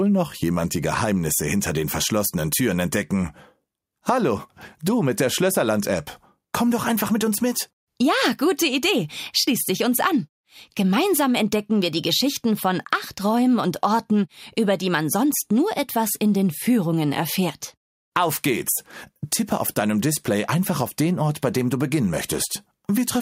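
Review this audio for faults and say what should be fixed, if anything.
No faults turn up in this audio, so nothing needs to be fixed.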